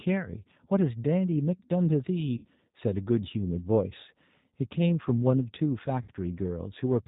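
Speech, passed through the G.729 codec at 8 kbit/s, and the coding damage is plainly audible: a slightly rough, synthetic edge to the voice. On a spectrogram the energy stops flat at 4 kHz, with an empty band above it and blurred, less distinct harmonics below. VoIP packet loss concealed by the speech codec occurs twice, at 2.37 to 2.46 s and 6.02 to 6.11 s. Each gap covers about 60 ms, which fits three lost 20 ms packets. The decoder keeps repeating its last pitch and vocal-tract shape at falling gain, producing a brief buzzy tone or coloured noise that fades. The waveform shows the sound shrinking in amplitude, and the spectrogram shows it dimming until normal speech resumes, still weak for a moment afterwards.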